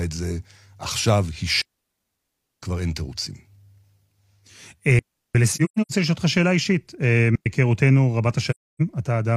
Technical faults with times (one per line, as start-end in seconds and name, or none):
1.61-2.62 digital wireless dropout
4.99-5.35 digital wireless dropout
5.53-5.92 AAC frame loss with muting
7.35-7.46 digital wireless dropout
8.50-8.81 AAC frame loss with muting